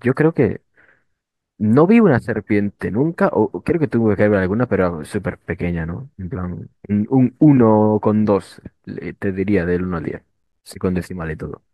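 Near the end, from 10.35 to 10.64 s, the processor falls behind and misses a run of buffer deadlines in quick succession: processor overload crackle. Each late buffer is replaced by silence with abrupt edges, and the spacing of the dropouts fits buffers of around 10 ms, with roughly ten lost in that span. On the speech this is heard as a short, gritty burst of crackle and tearing that breaks up the sound, then clears once the load eases.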